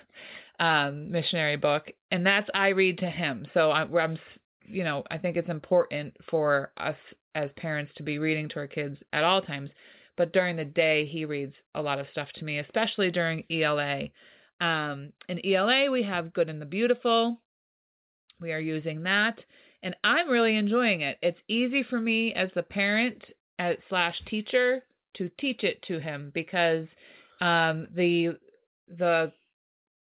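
No technical faults are audible.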